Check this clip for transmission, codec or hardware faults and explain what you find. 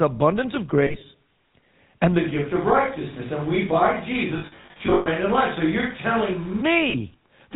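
Three faults are present: GSM full-rate coding throughout, lost GSM frames in three places, and a switch to a distant microphone.

GSM full-rate codec, whole clip: pulse-driven vocal-tract modelling at 13 kbps leaves plainly audible buzzy roughness. The spectrogram shows nothing above 4 kHz.

Lost GSM frames at 0.86–1.03 s, 4.38–5.08 s and 6.90–6.96 s: the last good frame is repeated, giving a metallic ring. Smeared, flattened harmonics appear on the spectrogram.

Switch to a distant microphone, 2.20–6.60 s: the sound turns abruptly roomy and hollow, with thinner bass, similar level and a raised noise floor. This is likely from losing the close microphone. It shows as a reverberant tail and a fuller noise band.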